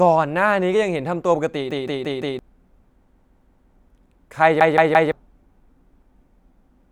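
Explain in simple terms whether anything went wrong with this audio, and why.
Repeated buffer at 1.71–2.39 s, 3.07–3.76 s and 4.61–5.12 s: fresh audio arrived late, so the player replayed the same 0.17-second chunk three or four extra times, causing a stutter.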